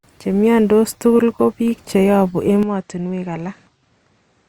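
At 2.63 s the speech abruptly turns duller and quieter, dropping by around 10 dB with no gap at the changeover, and stays that way to the end. From that point nothing above 8.3 kHz survives, and a faint new background noise sits well below the speech. The likely cause is an input switched to a poorer device mid-recording, a different microphone or headset whose narrower band, lower gain and own noise floor replace the original.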